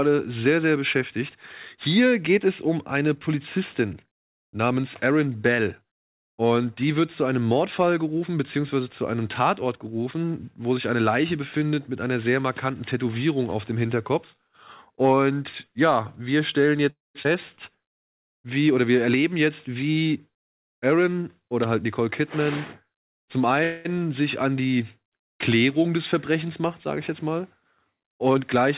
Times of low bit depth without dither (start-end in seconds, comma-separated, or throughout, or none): none